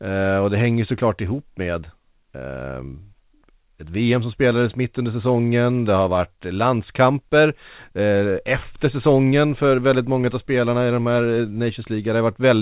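Nothing goes wrong anywhere in this bit of speech; it just has the narrow, phone-like sound of a call path running G.711 mu-law at 64 kbps, with nothing above 4 kHz, and no glitches or disturbances turn up along the way.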